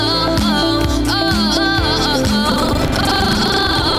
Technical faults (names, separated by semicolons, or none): buffer tearing